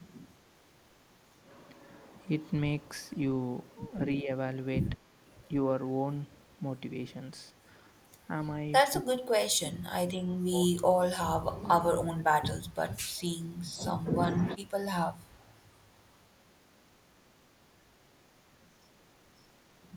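An echo canceller likely caught between both sides talking at once, unable to tell the local talker from loudspeaker echo, turned the speech down. It is speech suppressed in double talk. A brief, shallow dip at 4.22 s is followed by a run of deep cuts at 8.9 to 9.77 s, 9.99 to 10.29 s, 10.49 to 11.09 s, 11.35 to 11.68 s and 11.87 to 12.53 s. In these the voice sinks by around 20 to 25 dB.

Next comes echo leak: far-end audio likely reached a loudspeaker-side microphone and was not fully cancelled, so some of it was sent back. At 13.17 s and again at 15.3 to 15.52 s, a faint delayed copy of the voice trails the original by 151 ms. It sits roughly 35 to 40 dB below the speech.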